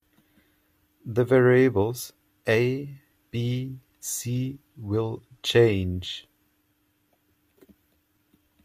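Speech, with nothing technically wrong to hear in it.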